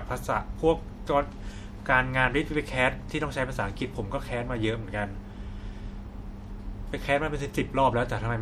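Across the whole speech recording the sound has a watery, swirling quality, with metallic chirps on s sounds and softened consonant attacks. This is likely MP3 compression at a low bitrate, which fits a 64 kbps encode, where weak frequency lines drop in and out between frames.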